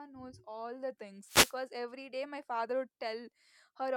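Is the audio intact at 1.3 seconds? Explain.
No. At 1.3 seconds the speech is caught in a wireless microphone noise hit running from 1.24 to 1.57 s. The analogue FM radio link from the microphone fades as reflected paths cancel the direct signal at the receiver, so receiver noise climbs and breaks through. Across those roughly 0.33 s it is heard as a short swish of static laid over the voice.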